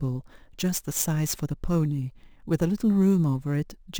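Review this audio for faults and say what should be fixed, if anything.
Imaging from sample-and-hold upsampling runs through the whole speech clip. A bright metallic fizz rides about 20 dB below the speech and rises and falls with it. Mirrored copies of the spectrum fill 11 kHz to 22 kHz. This points to a 22 kHz source raised to 48 kHz by repeating samples without smoothing. Resample with a proper interpolating low-pass filter instead of repeating samples.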